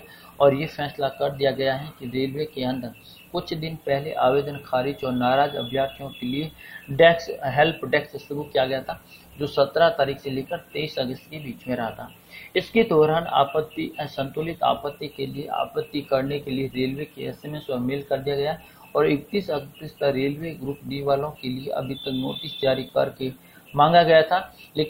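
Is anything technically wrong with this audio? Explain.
Yes. Throughout the clip there is low bit depth with noise shaping. The audio sits at an effective resolution of 10 bits, and the rounding error from that coarse quantisation is fed back so its energy is pushed up toward the top of the band. It is heard as a steady, thin hiss, roughly 30 dB below the signal, rising sharply with frequency. Plain truncation would give flat, grainy distortion, and ordinary tape or preamp hiss lacks this strong upward tilt.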